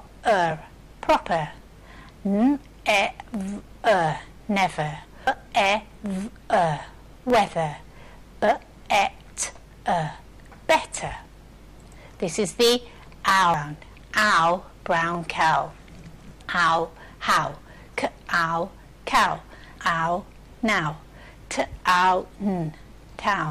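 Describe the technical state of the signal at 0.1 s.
At 0.07 s there is a burst of damaged data in a compressed stream. Part of the encoded stream is corrupt, so the decoder misreads that frame and loses sync while it hunts for the next frame header. The result is a brief chirp or blip.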